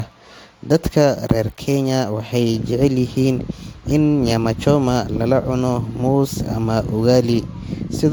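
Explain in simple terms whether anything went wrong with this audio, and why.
Something went wrong: the speech was likely saved in a compressed format a few times over, each save squeezing it again. That generation loss runs from start to finish, making the sound swirly, smeared and hollow, with the starts of sounds blurred.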